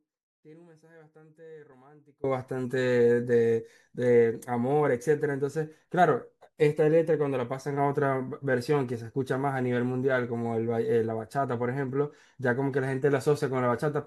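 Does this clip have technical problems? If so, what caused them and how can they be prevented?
Yes. From the very start until 2.24 s the speech is already missing, replaced by only a faint residue sitting about 25 dB below its normal level, and then it snaps back abruptly rather than fading in. This is an audio dropout to a faint residue, likely caused by the signal feed breaking while the recording path stayed live and caught only leakage. Secure cables and connections and confirm steady input before recording begins.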